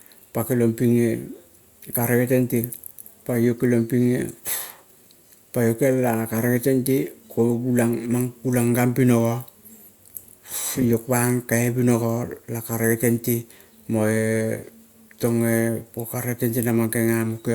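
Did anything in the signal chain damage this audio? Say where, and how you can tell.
No, nothing in the signal chain has audibly damaged this speech recording; it arrives intact, with no stage leaving a mark on the signal.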